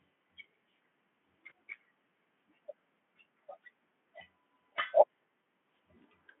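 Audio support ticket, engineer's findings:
VoIP packet loss concealed by the speech codec, at 1.49 s and 5.41 s: a brief smeared patch where one 20 ms frame goes missing. The decoder repeats the last pitch and filter at falling gain. Spectrogram: harmonics frozen and fading, confined to the Speex narrow band.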